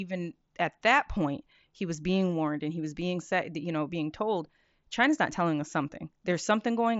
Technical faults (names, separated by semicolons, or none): none